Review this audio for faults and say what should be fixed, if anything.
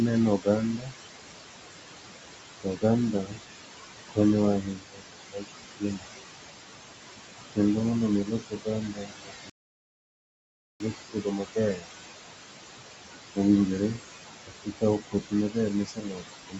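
Noise suppressor artifacts run through the whole clip. The background, about 9 dB below the speech, is pulled down by about 18 dB between phrases and rises again under them. Gentler suppression and slower gain smoothing would prevent this.

Speech cut by the noise suppressor occurs at 0.39–0.94 s, 2.60–2.83 s, 3.24–3.40 s, 4.63–6.08 s, 8.25–11.88 s (just after "kendo mondo omi") and 14.47–16.59 s. Quiet speech is taken for noise and dropped by about 13 to 19 dB. It sounds swallowed. A better speech detector or a lower suppression ceiling would prevent it.

A playback stall silences the audio from 9.50 to 10.80 s, about 1.3 s. The sound stops in mid-flow and then resumes. The player most likely ran out of buffered data or had its thread blocked. A larger playback buffer and a playback thread that cannot be blocked would prevent it.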